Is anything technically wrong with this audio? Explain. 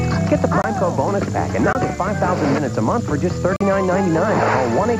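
Yes, there are three blocks of digital silence, at 0.62–0.64 s, 1.73–1.75 s and 3.56–3.61 s. The output buffer most likely wasn't filled in time, so the sound drops straight to zero and back with no fade. The first two gaps are about 21 ms, with the last one about 43 ms, which fits a 1024-sample buffer missed once and then twice in a row. The longer third gap comes across as a short hole.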